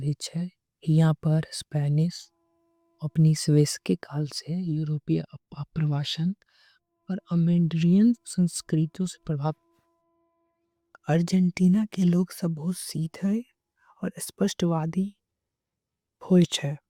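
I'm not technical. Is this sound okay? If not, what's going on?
Yes, nothing is wrong with this speech recording.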